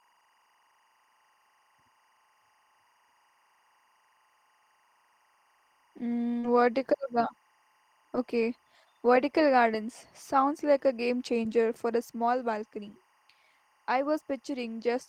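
Timecode bleed runs through the whole speech clip. A linear timecode signal at 23.976 frames per second has leaked in from a nearby track or cable. It sits roughly 40 dB below the speech. It flips between tones near 1 and 2 kHz, giving a faint, steady chirping warble.

At 6.39 s comes a short concealed packet loss, lasting to 6.45 s. About 40 ms of audio never arrived in time. The decoder covered 38 ms by extending the preceding sound, then blended back. It is heard as a brief smear or wobble.

From 6.43 to 6.49 s, overlapping that gap, comes a lost packet rebuilt from error correction. Two packets were recovered from low-bitrate copies carried in the packets that followed. There is no silence. The 40 ms rebuilt stretch sounds grainier and noisier than its surroundings.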